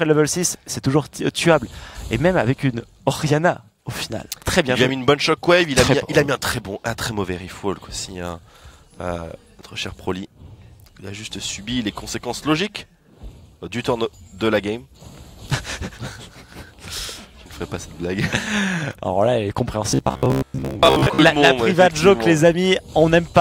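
From 19.9 to 21.2 s the sound turns into a rigid metallic buzz at 66.8 Hz, likely robotic sound from repeated short buffers, with most of the audio replaced by loops of about 15 ms, unlike simple dropouts, which leave silence.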